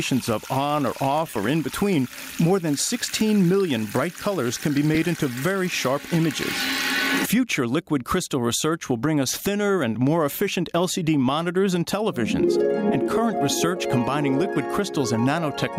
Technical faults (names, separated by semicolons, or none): gain pumping; lost LE Audio frames